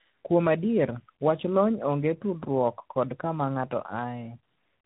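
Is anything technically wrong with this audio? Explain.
Yes. Throughout the speech there is tandem speech coding: the call has been decoded and re-encoded at each network border, with three speech coders in a row. Each coder works on the previous one's damage, so the errors stack. The result is rougher, more muffled and more warbly than any one coder would make it, and nothing is left above 3.9 kHz. The warble points to an AMR-type coder sitting between ADPCM stages.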